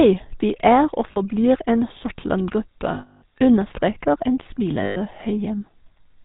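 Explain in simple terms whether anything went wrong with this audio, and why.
The whole clip has passed through the GSM full-rate codec, the old mobile-phone voice coder. The speech sounds buzzy and gravelly, with nothing above 4 kHz. A plain telephone filter would sound dull and thin, but not rough like this.

There are also lost GSM frames. Each gap is filled by stretching the last good sound into a metallic ring instead of clean silence. This happens at 1.12 s, just after "vi er og", and briefly (40 ms). It happens again from 2.94 to 3.23 s, just before "understreker en", and from 4.84 to 4.98 s, just after "understreker en".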